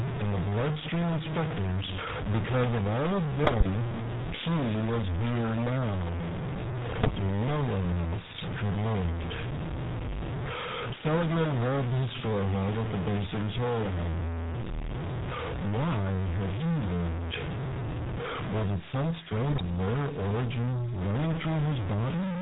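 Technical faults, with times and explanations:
Throughout: stuck bit. A distortion rides on every sound, and pauses fill with a hiss instead of going quiet. The likely cause is one converter bit held fixed, which offsets about half the samples by a constant step. Unlike codec roughness, it persists in silence.
Throughout: GSM full-rate codec. The sound is band-limited to about 4 kHz with a gravelly, buzzy texture. This fits the 13 kbps full-rate coder, which rebuilds speech from a vocal-tract filter driven by sparse, regularly spaced pulses. It is a steady coloration, not bursts.
3.44–3.67 s, 6.90–7.10 s and 19.50–19.66 s: GSM bit errors. Each stretch breaks into squawks, pops and gargling lasting about 0.15 to 0.23 s. Corrupted filter, pitch and gain parameters reached the decoder, so several consecutive frames came out with bent spectra or jumping levels.
18.59–21.06 s: feedback whistle. 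A thin, steady tone at 6.2 kHz, about 20 dB below the speech, sits behind the sound and slowly swells and fades in level. The likely cause is a loudspeaker-to-microphone loop held just at the edge of feedback. Unlike a howl, it never grows.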